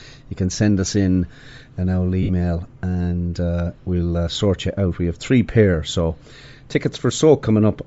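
The whole speech clip carries a breathy, grainy edge, likely from Bluetooth LC3 compression at a low rate consistent with about 32 kbps. The LC3 transform codec discards much of the upper spectrum and fills it with noise. On a spectrogram the high band looks speckled and noise-filled rather than sharply structured.

From 2.23 to 2.31 s, between "us in an old" and "and uh we'll uh", lost LE Audio frames leave a brief noisy smear. The gap fits roughly six 10 ms frames, which the decoder filled by repeating the last spectrum with random signs. The spectrogram shows a blurred, smeared patch there, and the waveform loses its clear speech shape.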